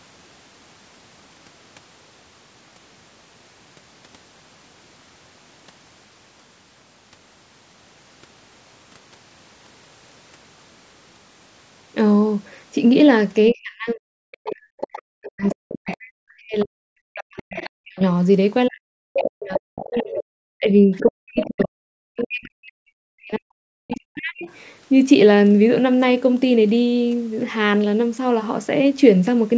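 At 13.50 to 13.55 s a brief scrap of a second voice appears at about 30 dB below the talker. This is the other side's voice leaking through, likely because the talker's device plays the far side from a loudspeaker and its echo canceller left a residue in the microphone. The same leak returns at 14.47 to 15.94 s and 17.39 to 17.70 s at about 15 dB down. It comes back stronger at 19.19 to 20.24 s and 21.07 to 21.66 s at about 10 dB down, and at 23.91 to 24.53 s at about 20 dB down. Unlike room reverb, it is a separate speaker.

Spanning those moments, from 13.52 to 18.01 s and again from 18.68 to 24.47 s, the main talker repeatedly dips, dulls or breaks into pieces, by up to about 40 dB. This is speech suppressed in double talk, likely the canceller turning everything down while both sides spoke.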